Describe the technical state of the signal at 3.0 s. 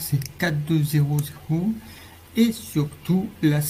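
Nothing is wrong with the signal at 3.0 s; the audio is intact at that moment.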